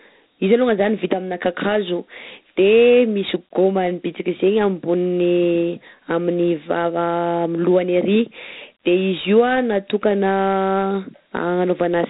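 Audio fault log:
throughout, Dialogic VOX ADPCM: the speech carries a gritty hiss that rises and falls with the talking, and nothing is heard above about 3.8 kHz. The hiss comes from each sample being coded as a 4-bit step from a prediction, a scheme that fits a 32 kbps stream at 8,000 samples a second. The quantising noise therefore tracks the signal. A plain low-pass filter would dull the sound without adding grit, and a steady noise floor would stay level during pauses.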